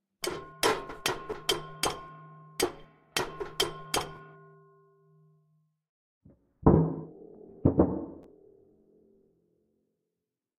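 At 1.31 s, 4.16 s and 8.23 s, fresh audio failed to reach the playback device in time, so it played its previous buffer a second time, a repeated buffer. Each repeat lasts about 12 ms, which fits a 512-sample buffer. Because the piece is so short, the doubled segment and its hard joins come across as a brief click or buzz rather than an audible stutter, and around 10 ms of the original sound goes missing each time.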